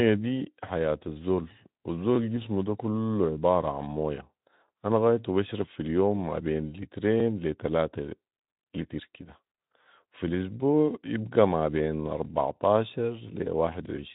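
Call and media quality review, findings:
Overlapping chunks, 9.73–9.75 s (just before "وفي الاسبوع يبقي ما") and 12.25–12.27 s (just after "الاسبوع يبقي ما بين"): click/stutter at each join, about 23 ms replayed. Each chunk starts before the previous one ends. Joins are 2.5 s apart, which points to a fixed chunking stage. Speex path is band-limited, with nothing above about 3.9 kHz.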